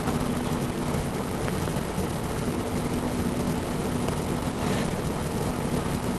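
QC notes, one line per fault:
1.48–1.70 s, loud pop: two sharp pops in quick succession, peaking around 10 dB above the surrounding sound, which continues underneath. The likely cause is a voltage step or pulse, such as a plug, switch, static discharge or driver glitch, shaped into a pop by downstream circuitry.
4.51–4.61 s and 4.88–4.93 s, short stall from a late packet: the sound is held too long, for 70 ms and then 20 ms, with a slight buzz or dip. The jitter buffer ran dry and stretched the last audio until the packet arrived, so nothing is lost.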